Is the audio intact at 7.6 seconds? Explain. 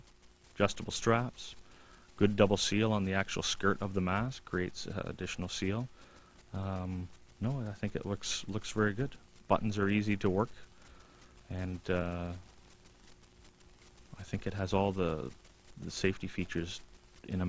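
Yes, at 7.6 seconds the audio is intact, with no dropout, click, distortion or other fault at that moment.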